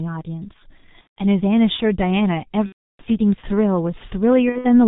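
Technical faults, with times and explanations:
Throughout: G.723.1 codec, heavily degraded. Nothing survives above 4 kHz, so the speech is muffled. The coder rebuilds the voice from a coarse model updated only every 30 ms, which blurs consonants and adds hoarseness, consistent with the 6.3 kbit/s mode.
1.01 to 4.81 s: VoIP packet loss concealed by the speech codec, at 1.01–1.19 s, 2.66–3.03 s and 4.50–4.81 s. About 150 ms, 330 ms, then 120 ms (scattered, longest gap 60 ms) go missing. The decoder extends its last pitch and filter with falling gain, giving fading buzzy tones that stay weak after packets resume.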